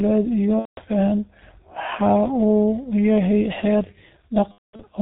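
The whole clip carries G.723.1 codec damage: muffled, hoarse speech with nothing above 4 kHz and smeared consonants, which fits its 6.3 kbit/s mode. From 0.59 to 0.83 s, and again from 4.52 to 4.83 s, VoIP packet loss is concealed by the speech codec. The decoder stretches the last sound and fades it until it is muted, with the second gap broken up.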